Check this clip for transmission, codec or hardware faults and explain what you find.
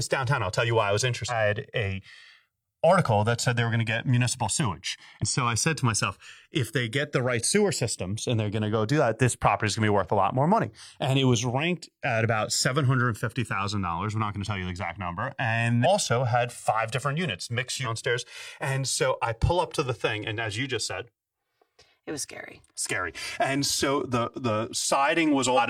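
Two faults in this speech: the stereo channels drift apart throughout, and there are five short compressed-stream glitches.

Channels drifting apart, throughout: the channels run on clocks roughly 200 ppm out, with the offset creeping to around 4 ms, so mono playback gets slow, sweeping flanging.

Damaged data in a compressed stream, at 1.26–1.31, 5.18–5.23, 15.81–15.86, 17.81–17.87 and 25.54–25.59 s: corrupt bytes make the decoder lose sync and hunt for the next frame, giving brief glitches heard as a chirp, squawk, click or short hole.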